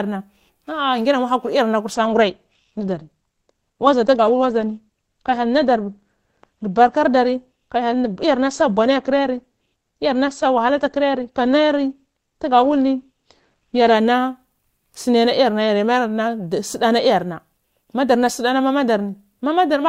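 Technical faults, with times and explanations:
1.94 to 13.94 s, adaptive stream at a lower bitrate: the stream switches for 12 s to a lower-quality rendition of the speech, most likely because the connection slowed, and the character of the sound points to an Opus encode dropping from around 64 kbit/s to around 16 kbit/s. With fewer bits to spend, the encoder discards everything above 8.8 kHz, so the top end goes dull, with coding artefacts more audible. Quality changes abruptly at both boundaries, with no gap in playback.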